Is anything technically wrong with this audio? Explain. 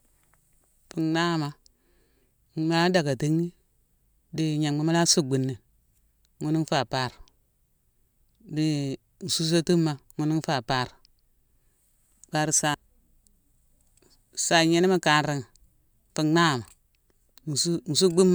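No, nothing technically wrong can be heard here.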